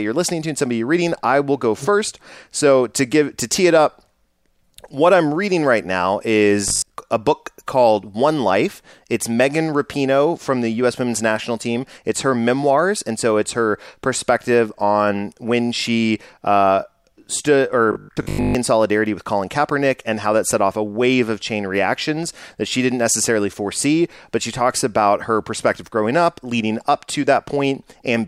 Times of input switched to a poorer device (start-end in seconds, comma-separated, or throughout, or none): none